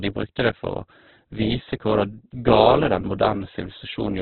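Opus compression throughout the speech: nothing above 4.4 kHz and a grainy, rough, noisy texture, likely Opus music mode at a very low bitrate near 8 kbps.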